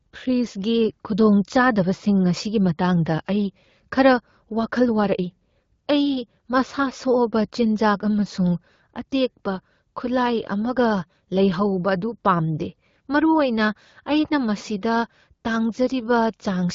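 Speech, with no technical fault to be heard. It carries the sound of an AMR wideband (HD Voice) path at 12.65 kbit/s, which keeps the speech clear while limiting the band to about 7 kHz, with the region above 6.4 kHz filled in by shaped noise and only light coding damage.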